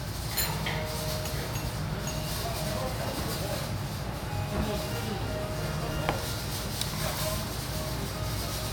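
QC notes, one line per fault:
No faults heard.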